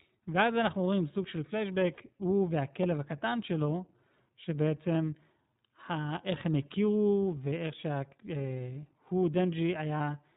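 From start to finish the speech carries plainly audible iLBC codec damage. Nothing above 4 kHz survives, and each short block is coded on its own, giving a rough, slightly synthetic texture. The sound fits the 15.2 kbps mode with 20 ms frames.

Lost iLBC frames appear at 1.94 s, 4.44 s and 9.98 s. The first gap lasts about 40 ms, roughly two frames. The other two last about 20 ms, a single frame each. Each gap is filled by a repeated pitch cycle mixed with noise, heard as a brief held, buzzy vowel, and the speech snaps back immediately afterward.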